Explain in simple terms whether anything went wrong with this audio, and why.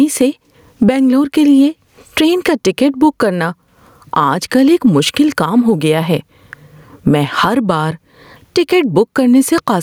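Gain pumping runs through the whole recording: the sound is squashed, with loud and soft parts pushed closer together in level, likely from the gain being set too high.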